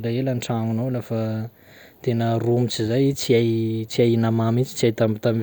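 A recording of speech with no technical fault to be heard in it. Nothing in the recording calls for a time or a cause.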